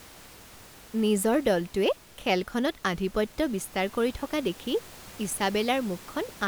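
There are no technical faults in this speech recording; the only background is the room's own noise, about 22 dB below the speech.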